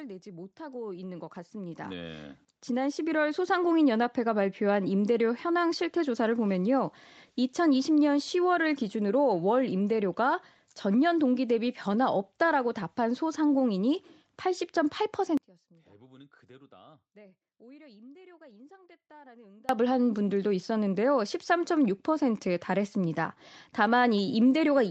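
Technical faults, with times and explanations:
0.23 to 6.3 s, automatic gain rising: The automatic gain control judged the incoming level too low and kept raising its gain, by about 16 dB across these six seconds. Because the gain acts on everything the microphone picks up, the speech and the background noise grow louder together in a slow, steady swell. There is no sudden step, just a gradual climb until the level settles near 6.3 s.
15.37 to 19.69 s, audio dropout to a faint residue: The speech cuts out abruptly and stays gone for about 4.3 s, then snaps back mid-flow. This was likely caused by the wanted signal being lost upstream while the rest of the chain stayed live. The gap is not true silence. A faint trace of sound sits roughly 30 dB below normal level, and because the change is abrupt it sounds like a hard break rather than a pause or fade.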